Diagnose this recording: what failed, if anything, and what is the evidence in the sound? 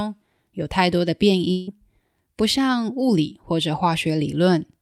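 From 1.51 to 1.69 s the speech gives way to a smeared, buzzy continuation of the last sound that fades across the gap, without settling into full silence, and then resumes with roughly 0.16 s of material simply absent. This is most likely a long network dropout: packets stopped arriving, the receiver's concealment stretched the last received audio to fill the hole, and playback picked up later without the lost portion.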